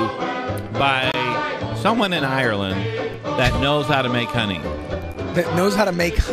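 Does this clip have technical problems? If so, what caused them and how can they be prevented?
Yes. The clip has gaps between stream segments: the timestamps of consecutive roughly 2-second segments don't line up, leaving small holes that the player fills with silence. These are heard as hard-edged dropouts at 1.12 s (about 24 ms), 3.14 s (4 ms) and 5.14 s (about 10 ms), spaced about two seconds apart, with no audio actually missing. Preventing this means making each segment's start timestamp exactly match the previous segment's end when packaging the stream.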